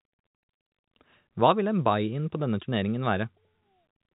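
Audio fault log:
No faults detected.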